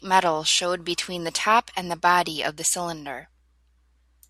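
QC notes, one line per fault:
0.91 s and 2.67 s, dropped samples: two sharp clicks, likely a couple of missing samples making the waveform jump abruptly, each showing as a thin vertical spectrogram line.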